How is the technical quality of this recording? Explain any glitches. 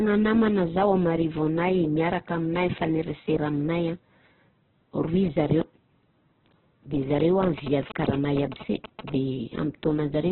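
The recording has two faults: heavy codec damage throughout and a burst of radio interference late in the clip.

Throughout, the speech is band-limited, with nothing above 4.2 kHz, and sounds grainy and rough. The likely cause is Opus compression at a very low rate, around 8 kbps, filling starved bands with noise.

From 7.20 to 9.10 s, GSM signalling bursts from a nearby 2G phone are rectified by the audio circuit. They are heard as a galloping dit-dit-dit of short 217 Hz buzzes, roughly 10 dB below the speech.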